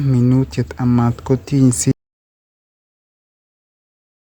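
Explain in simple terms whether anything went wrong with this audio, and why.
Audio dropout to silence, from about 1.9 s to the end of the clip: the speech cuts off mid-flow and total silence follows, with no background hiss at all. Most likely the input was lost, through a disconnected device or link, while recording carried on writing nothing.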